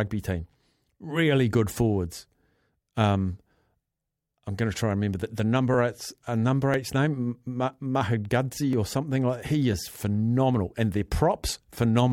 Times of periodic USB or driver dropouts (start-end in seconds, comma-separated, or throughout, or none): 0.74-11.74